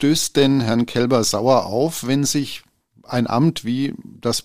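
Listening through this speech recording, nothing stood out as a technical problem at any point.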